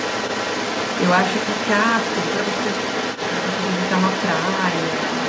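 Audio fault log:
Throughout, other side's voice leaking through: a second voice sits under the speech the whole time, only about 5 dB below it, likely echo from the talker's loudspeaker that the echo canceller left in the microphone signal, heard within audio band-limited to 8 kHz.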